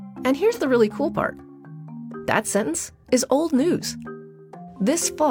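A brief smeared, noisy patch interrupts the audio from 0.52 to 0.59 s, the sign of AAC frame loss with concealment. About 43 ms went missing, which fits a single lost frame, and the decoder covered it by reusing the last good spectrum with altered phase. Unlike a plain dropout or muted gap, the sound never goes silent; the hole is filled with a blurred imitation of what came before.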